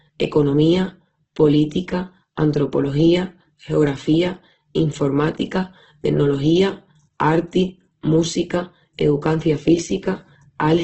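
From start to finish, the speech sounds grainy, rough and noisy. Nothing reaches above 8 kHz. The likely cause is heavy Opus compression, which fits a bitrate around 12 kbps. Starved bands get filled with folded or noise-like energy, so tones turn coarse and hissy.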